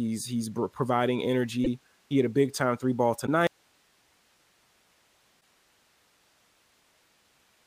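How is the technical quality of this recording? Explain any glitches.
The recording is damaged: it has three short MP3 glitches and then loses its signal from mid-clip to the end.

Broken MP3 bit reservoir, at 1.63 to 1.67 s just after "he's providing", 3.25 to 3.28 s after "big time three ball", and 5.40 to 5.46 s: the likely cause is frames missing from the MP3 stream. MP3 frames store some of their data in earlier frames, so the frame after a cut reaches back and decodes someone else's bytes. Each spot is a brief chirp, noise burst or short hole, with a jump ahead in the audio. The MP3 frames here are 26 ms long.

Audio dropout to a faint residue, from 3.47 s to the end, right after "big time three ball": the speech signal likely stopped reaching the recorder while the input stayed live and kept recording. The speech cuts off abruptly, not as a fade or a natural pause. What remains is only hiss, about 40 dB below the speech level.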